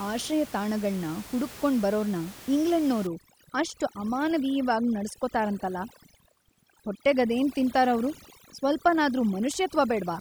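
From about 3.07 s to the end, overdone noise removal kicks in, gating bands near the noise floor so the background drops and turns twinkly, while the room noise before that sits about 18 dB below the speech.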